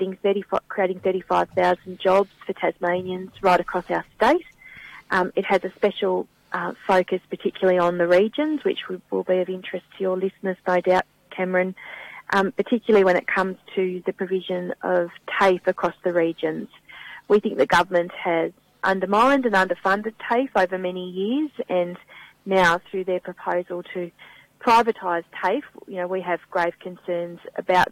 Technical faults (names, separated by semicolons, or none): none